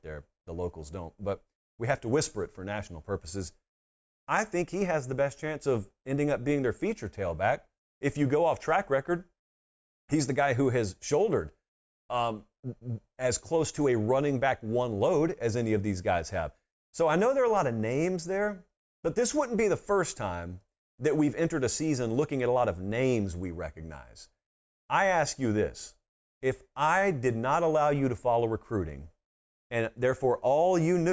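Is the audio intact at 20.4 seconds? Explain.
Yes, at 20.4 seconds the speech plays through intact, with no audible dropout, click, distortion or other fault at that moment.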